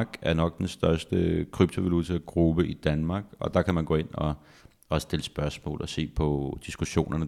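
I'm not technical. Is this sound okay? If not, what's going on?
Yes, this speech recording sounds fine, with nothing going wrong anywhere in it that you'd need to worry about.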